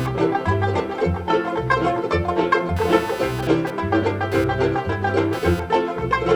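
Across the whole clip, computer activity noise is present: load swings in the processor or graphics circuitry disturb the ground shared with the audio path, adding a buzzy, chirping pulse near 300 Hz that sits roughly 20 dB under the music and follows the machine rather than the playing.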